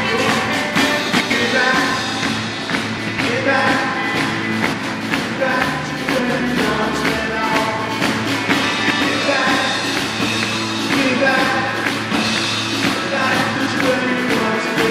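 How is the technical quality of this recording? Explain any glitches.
The recording has one recurring fault, frames out of order, at 1.09–1.31, 2.97–3.19, 4.72–4.95, 6.19–6.41, 8.80–9.02 and 13.55–13.77 s. In each, two adjacent blocks of about 104.5 ms (fitting runs of four frames) are decoded swapped, producing a garbled flutter. On a spectrogram or waveform, the two halves appear exchanged, with visible seams at the joins.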